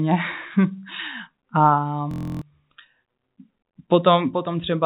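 A speech recording carried over a narrowband G.711 call path, with nothing above 4 kHz, shows a clock drift between sender and receiver: the sender runs about 2% slow, so the jitter buffer keeps draining. This produces repeated timing corrections from 0.73 to 4.71 s. Playback runs at 98% speed, and small repeated slices add about 70 ms in all. They sound like faint, unevenly spaced hiccups and appear as tiny duplicated waveform segments. A system hang loop from 2.11 to 2.42 s repeats one 23.22 ms block 13 times, which fits a 1024-sample buffer. It produces a 43.1 Hz buzz, about a third of a second of real audio is lost, and a spectrogram shows identical vertical stripes repeating at a steady rate.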